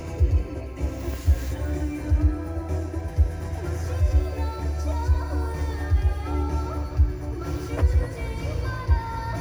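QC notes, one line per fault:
No technical faults can be heard anywhere in this clip of sounds.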